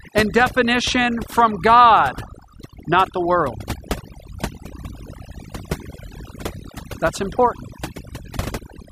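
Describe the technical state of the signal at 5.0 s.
At 5.0 s, as throughout the clip, video or display buzz sits under the speech: a 50 Hz field-rate buzz with hash above it and a thin 15.6 kHz line-rate whine, roughly 25 dB below the speech. This comes from a screen or video cable coupling into the audio path. On a spectrogram it shows as steady horizontal lines at 50 Hz and its harmonics plus a fine line near 15.6 kHz.

Overdone noise removal also runs through this moment. Noise reduction set too hard pulls individual frequency bands down or off whenever they fall near its noise estimate, taking quieter parts of the speech with them. The background drops and breaks up into twinkling specks. A spectrogram shows scattered isolated dots between syllables and patchy, hollowed-out speech harmonics.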